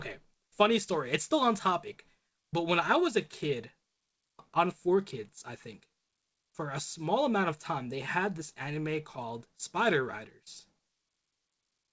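Clock drift between sender and receiver runs through the whole clip, with the sending side's clock running about one and a half percent slow. The receiver's jitter buffer keeps drifting toward empty, so the sound never quite holds a steady pace. Packet loss leaves gaps or smeared fill-ins at isolated moments. Drift instead produces a slow, one-directional pull that never lets up.

Repeated timing corrections are what that drift sounds like in practice, from 0.28 s to 11.54 s. To keep the buffer from running dry, the receiver repeatedly repeats short slices, stretching the whole passage to about 99 percent speed and adding roughly a fifth of a second in total. The result is faint stutters and a slightly uneven, dragging tempo, spaced irregularly but all lengthening. That separates it from a smooth time-stretch, and from jitter bursts that both cut and repeat. Throughout, the band stops at 8 kHz, which fits a G.722 call codec at 64 kbps.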